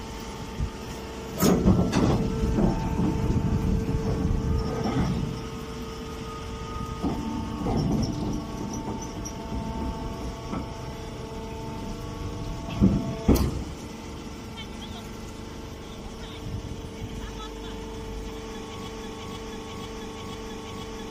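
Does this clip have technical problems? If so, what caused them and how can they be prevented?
Yes, there's a broken-record loop from 18.88 s to the end: a 0.49 s fragment repeats back to back five times. The player, encoder or stream likely stalled and kept resending its last fragment, losing the audio that belonged there. A stall watchdog that restarts the stream prevents it.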